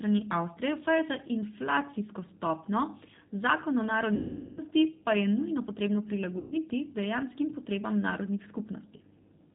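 Throughout, the speech carries a G.729 codec sound: nothing above 4 kHz and a slightly rough, synthetic texture from pulse-based rebuilding, which fits an 8 kbit/s codec rather than simple band-limiting. From 4.15 to 4.62 s and again from 6.38 to 6.58 s, VoIP packet loss concealed by the speech codec stretches the last sound into a buzzy tone or coloured noise that fades, with weak or distorted speech lingering after each gap. This differs from a plain dropout, which would go silent.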